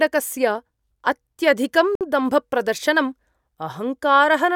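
Speech with a Bluetooth stall: the audio drops to silence from 1.95 to 2.01 s, a 56 ms gap, then resumes. The likely cause is radio interference holding up packets until the headphones' buffer ran dry and playback waited for the resent data.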